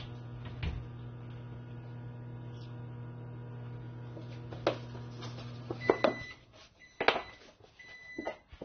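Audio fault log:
Throughout, AAC compression: nothing gets through above about 6.3 kHz, so the whole thing sounds dull and closed-in, and the codec damage is plainly audible, with smeared detail and a warbly, fizzy edge on anything sustained or hissy. That's the likely cause: an AAC-LC encoder squeezed hard enough to pull its cut-off down and thin out what's left, which fits a low bitrate somewhere around 24 kbps.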